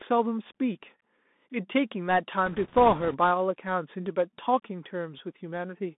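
From start to finish the speech carries the Bluetooth CVSD headset codec: the band runs from about 200 Hz to 3.6 kHz, s sounds turn scratchy and a granular hiss sits underneath, which fits a 64 kbps one-bit delta modulator whose adapting step lags fast, loud detail.

From 2.46 to 3.18 s, bit errors on the Bluetooth voice link, at a rate of a few percent, add a rushing, crackly noise over the speech. Each flipped bit nudges the decoder only slightly and fades out, so there are no sharp clicks.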